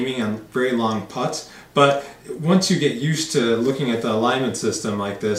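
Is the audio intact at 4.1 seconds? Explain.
Yes, the audio is intact at 4.1 seconds, with no fault at that moment.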